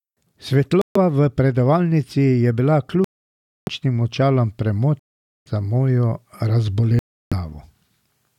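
Silent holes cut into the speech at 0.82–0.97 s (just before "v predavalnici je bila"), 3.04–3.68 s (right after "v predavalnici je bila"), 5.00–5.48 s (ending at "za mojo") and 6.99–7.33 s, lasting from 0.14 s to 0.63 s. They are likely a Bluetooth dropout, with packets arriving too late and being discarded. Unlike a stall or buffering pause, each gap starts and stops abruptly and the speech resumes further on, as though it had kept playing silently.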